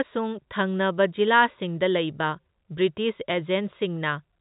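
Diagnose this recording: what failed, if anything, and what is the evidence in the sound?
Nothing failed, and the sound gives no evidence of a fault beyond the ordinary telephone band of G.711 coding, with nothing above 3.8 kHz.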